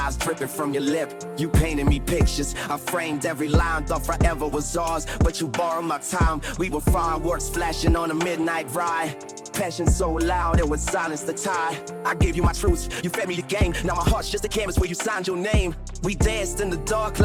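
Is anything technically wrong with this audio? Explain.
Yes. A time-stretched section runs from 12.19 to 15.33 s, where the audio plays about 1.43 times faster while its pitch stays put. This was likely software squeezing the passage by dropping short slices, so it sounds rushed.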